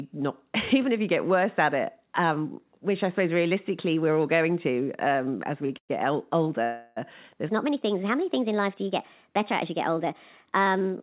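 At 5.66 s the speech briefly sticks: a sound is held about 30 ms too long, with a faint buzzy edge, before carrying on with nothing lost. This is a short stall from a late packet. The jitter buffer emptied, so the receiver stretched the last sound until the packet arrived.

Two longer hold-ups follow. From 5.77 to 5.91 s the last sound turns to a fading buzz and then drops to about 90 ms of silence, 118 ms in all. From 6.64 to 6.98 s a buzzy continuation fills 324 ms without going silent. In both places the speech resumes where it stopped. These are call audio freezes, likely caused by packets held up in transit, leaving the jitter buffer empty while the receiver padded the gap.

From 7.49 s to the end the speech is hurried and raised by about three semitones, playing 1.2 times too fast, with pitch and pace shifted together. This is a section at the wrong speed, likely from playback or editing against the wrong clock. 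The narrow, muffled band with nothing above 4 kHz runs throughout and comes from the G.711 call path.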